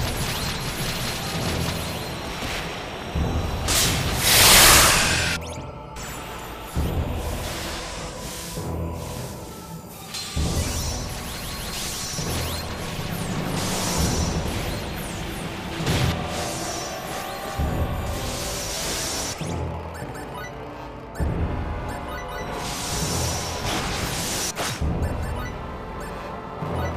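At 2.71, 6.72, 10.73, 14.74, 18.75 and 22.77 s, a brief click or stutter marks a join between overlapping chunks. The audio was handled in 4-second blocks, and each new block begins slightly before the previous one finished, so about 12 ms of sound plays twice at every boundary. The duplicated slice breaks the waveform's continuity, producing a short tick that recurs at a steady four-second spacing.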